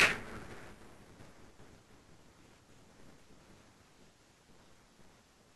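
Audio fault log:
throughout, buffer tearing: The speech carries a steady robotic buzz at 200 Hz. It sounds only while there is signal and drops away in silences. The writing and reading sides of the playback buffer have slipped and now cross inside every period. That points to a period of about 5 ms. Roughly half of each buffer holds audio from about 10 ms earlier. It is joined hard on both sides, so the clicks repeat at the buffer rate.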